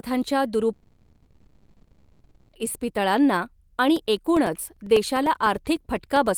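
From 0.73 s to 2.56 s the speech gives way to a buzzy smear of the last sound that fades into low steady noise, with no true silence, before the speech resumes with that stretch missing. This is likely a long network dropout, about 1.8 s lost and concealed.

From 3.96 s to 6.27 s, regular ticks sound every 0.1 s, about twenty of them, while speech is present. These are periodic USB or driver dropouts: a background task stalls the audio path at a fixed interval, cutting roughly 2 ms to silence each time.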